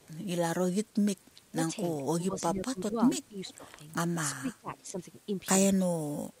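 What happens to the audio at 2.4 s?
At 2.4 s the speech sits inside a stretch of speech suppressed in double talk, running from 2.3 to 4.96 s. The level dips in pieces, by about 15 dB at its deepest, over about a second in total. The likely cause is an echo canceller that could not tell the near talker from loudspeaker echo while both sides spoke, and so attenuated everything. Overlapping this, from 2.37 to 2.42 s, is a brief echo leak: a faint copy of the speech, about 20 dB below it and delayed by 414 ms, slips through. This is likely residual loudspeaker pickup that the loudspeaker side's canceller failed to remove.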